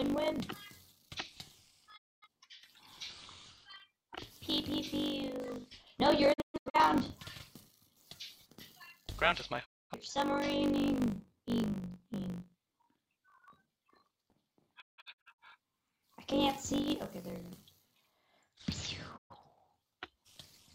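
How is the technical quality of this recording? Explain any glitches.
The recording has two problems: a constant buzz with sped-up playback, and five brief mutes.

Block size mismatch (truncated): A 50 Hz buzz runs throughout, and the audio plays 1.07 times too fast. Each block loses its end, which fits a 1024-sample write block being cut short.

Digital broadcast dropout: The audio fades out over 20 ms and goes silent at 1.96–2.27, 6.32–6.79, 9.64–9.95, 14.80–15.40 and 19.16–19.35 s. At 6.32 and 14.80 s the silence breaks into several short holes, the longest lasting 128 ms and 171 ms. The receiver muted while it had no valid signal.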